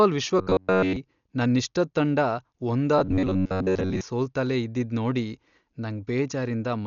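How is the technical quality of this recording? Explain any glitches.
The recording has two problems: heavy codec damage throughout the speech and two stretches of robotic buzzing.

Across the whole clip the sound is dull and band-limited, with nothing above 7 kHz and a rough, fluttery noise around voiced sounds. This is likely Dolby Digital compression at a low bitrate, around 48 kbps. The encoder narrowed the band and left many frequency lines without mantissa bits, and the decoder filled them with dither noise.

From 0.39 to 0.96 s and again from 2.99 to 4.01 s the speech turns into a rigid metallic drone at 93.8 Hz. That pitch fits a repeated block of about 10.7 ms, so the likely cause is robotic sound from repeated short buffers. Audio arrived too slowly, and playback looped the last short buffer while the real signal was skipped. The first stretch is repeated throughout. The second is repeated for roughly two thirds of its length, so some real speech breaks through.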